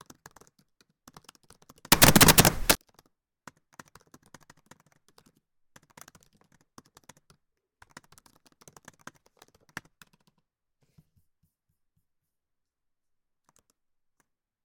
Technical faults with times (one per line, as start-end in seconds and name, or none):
1.92-2.75 samples built from the wrong bytes